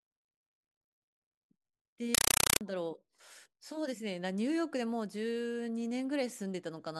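At 2.15 s the speech drops out and, until 2.61 s, a compressed stream is played as audio: loud, harsh chattering static, with 5.33 ms noise bursts repeating 31.25 times a second. That pattern points to an undecoded AC-3 stream, probably around 256 kbps.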